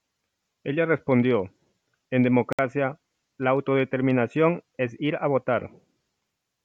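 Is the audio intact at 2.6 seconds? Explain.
No. The moment sits right at the end of a Bluetooth dropout. The sound cuts out at 2.53 s and returns at 2.59 s, leaving a hole of about 61 ms. Packets most likely failed to reach the headphones in time and were discarded. The output stayed silent until good data arrived. The length fits roughly three lost packets. The audio then resumes further along, as if it had kept playing through the gap.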